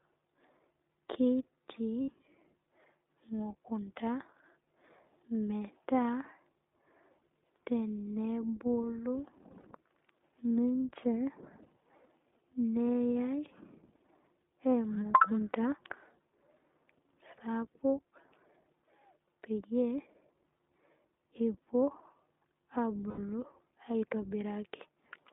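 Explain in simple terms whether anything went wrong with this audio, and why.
Two things went wrong. First, the whole clip passed through the iLBC codec, a phone-call codec built for internet calls. It keeps only a narrow slice of sound, roughly from 250 Hz up to 3.7 kHz, so the speech sounds thin and boxed-in. Its damage is plainly audible: the voice comes across rough and slightly synthetic. That happens because the codec squeezes each short chunk of speech, about 20 ms long, into a simplified model.

Second, there are lost iLBC frames at three moments: 2.02 to 2.10 s, 9.60 to 9.66 s, and 23.10 to 23.19 s. Here pieces of the signal went missing in transit. The decoder filled each gap by repeating the last bit of voice with some noise mixed in. So you hear a brief held, buzzy or breathy sound. The gaps last about 60, 40 and 80 ms, which fits three, two and four missing 20 ms frames. Because each frame stands alone, the speech recovers immediately afterwards.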